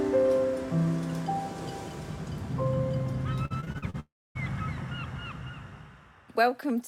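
From 3.45 to 3.96 s there is repeated packet loss (robotic sound): six short holes, the longest about 49 ms, are each patched by repeating the preceding sound, so about 37% of the stretch is filler. It sounds choppy, with pieces missing, with smeared, repeated bands on a spectrogram.

From 4.00 to 4.37 s the audio decays into a brief fading continuation of the last sound, then about 270 ms of flat, empty waveform before resuming with roughly 360 ms absent. This is likely a long network dropout, where nothing arrived and the gap was never recovered.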